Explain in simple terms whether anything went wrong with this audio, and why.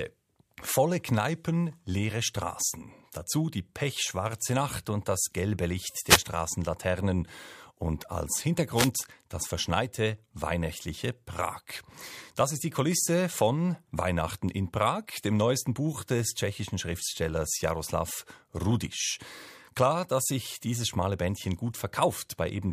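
Two quick wireless microphone noise hits, at 6.06 to 6.21 s and 8.74 to 8.90 s: the radio link briefly faded, so receiver static burst through over the speech.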